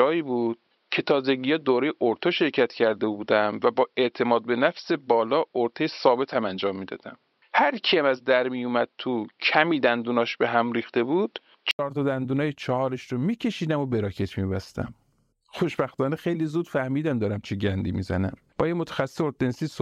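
From the start to 11.79 s the speech sounds dull and boxy, with nothing above 5.6 kHz, a faint background noise roughly 50 dB down, and a level about 5 dB different from what follows. An 80 ms silence then leads into fuller, brighter sound. The likely cause is an input switched to a poorer device and then back. A spectrogram shows a hard ceiling at 5.6 kHz that lifts at the switch, and the waveform shows a brief flat gap and a step in level.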